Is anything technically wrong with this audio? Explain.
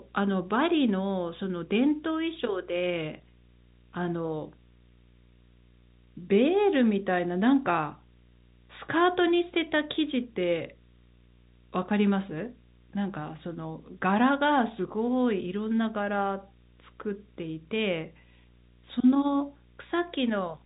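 Yes. A video or display buzz runs through the whole speech clip. A screen or video cable is coupling into the audio path. It produces a steady buzz at the 60 Hz field rate with hash above it, sitting roughly 30 dB under the speech. The telephone band stopping near 3.8 kHz carries it along.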